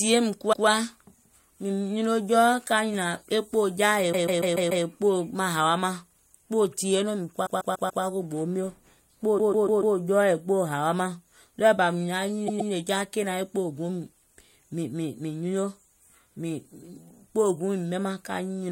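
Repeated frames make this speech stutter at 0.52–0.66 s (one extra play), 4.12–4.84 s after "jaà yèè" (five), 7.45–8.03 s before "ko gboo mio" (four), 9.37–9.95 s (four) and 12.47–12.71 s between "ɗɔɔɛ̀ bà mìŋ naŋ" and "ja kènaŋ e" (two). Each time, a block of compressed frames was decoded again. The block is 144 ms long, or 120 ms in the last case, which fits a run of five or six frames. Each stutter is a loop of identical sound. Unlike a dropout or an underrun, nothing goes silent or is lost. The repeats add time to the audio.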